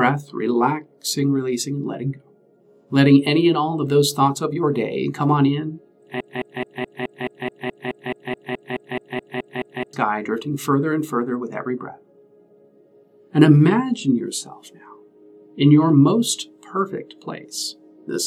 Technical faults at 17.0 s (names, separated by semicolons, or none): none